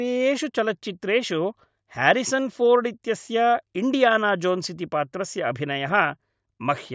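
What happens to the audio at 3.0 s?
Nothing goes wrong at 3.0 s; the speech plays through that moment intact.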